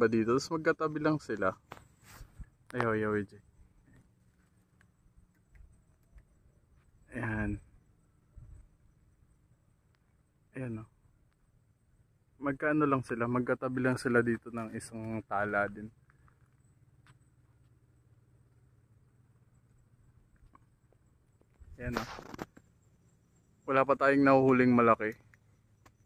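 No technical faults can be heard anywhere in it.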